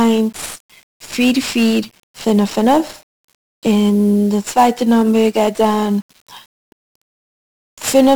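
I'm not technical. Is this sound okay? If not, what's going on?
No. The speech has 1-bit DFPWM compression throughout: each sample is reduced to a single up-or-down step, so fuzzy crackle rides on the speech itself, unlike steady background hiss.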